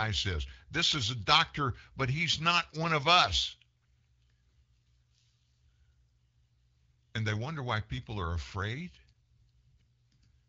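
AMR bit errors appear from 9.80 to 9.82 s, near the very end of the speech. On the AMR wideband (HD Voice) link, which sounds clear at 12.65 kbit/s, a few percent of the weakly protected bits in each frame arrived flipped while the checksum on the critical bits still passed. The decoder therefore placed its excitation pulses wrongly and used wrong finer pitch, gain and spectral values. The result is a brief hoarse, scratchy, gargly roughness while pitch and loudness stay roughly intact.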